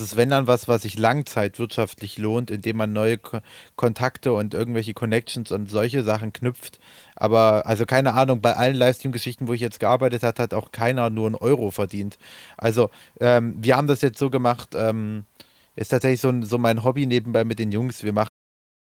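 Speech recording with no technical faults, closing on a smooth, editor-style fade-out near 18.3 s.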